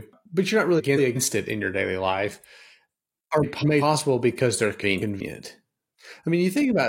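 Speech, with frames out of order at three points: 0.78 to 1.17 s, 3.43 to 3.82 s, and 4.80 to 5.21 s. In each, two adjacent blocks of about 186 ms play in swapped order, so the sound jumps ahead and then back. This gives a brief garbled flutter. The block length fits runs of four codec frames decoded in the wrong sequence. No time is lost overall.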